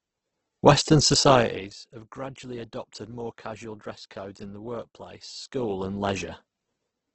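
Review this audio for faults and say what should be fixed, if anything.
The speech is grainy and rough across the whole clip, with a coarse, noisy texture on voiced sounds and no content above about 8.2 kHz. This is likely Opus compression in its CELT music mode at a low rate, roughly 12 kbps with wideband output. When the encoder runs short of bits, it fills bands with folded or noise-like energy instead of the real detail. To prevent this, encode at a higher bitrate, or use the speech-oriented mode for voice material.

From 1.28 to 1.71 s, a ticking, zipping texture rides on the speech while the level drops by about 20 dB. This is zipper noise. The gain moves in hard steps of about 1 dB, roughly 50 times a second, with no interpolation, so each step leaves a small click. To prevent this, ramp the gain per sample or smooth it with a short filter instead of updating it once per block.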